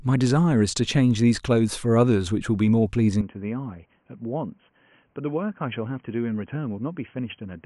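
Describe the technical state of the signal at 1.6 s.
At 1.6 s the speech signal is intact, with no audible technical fault at that moment.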